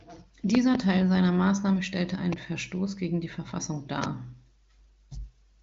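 Loud pops occur at 0.55 to 0.77 s as a quick pair, then singly at 2.33 to 2.35 s and 4.04 to 4.06 s, peaking about 15 to 20 dB above the speech, which carries on underneath. A voltage step or pulse, likely from a plug, switch, static or driver glitch, was added to the signal, giving sharp thumps. The AMR wideband speech stays clear throughout.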